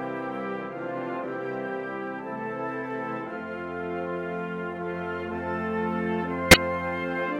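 A corrupt frame decoded at 6.51 to 6.57 s cuts into the music as a sharp, loud blip of noise lasting about 60 ms. Flipped bits in a couple of compressed frames were misread, so wrong gains and codes scattered energy across unrelated frequencies, peaking around -5 dBFS.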